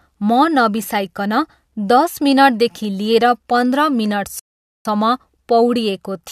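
At 4.39 s the speech hits a rebuffering stall: the player ran dry and went silent for about 0.46 s, then picked up exactly where it left off at 4.85 s.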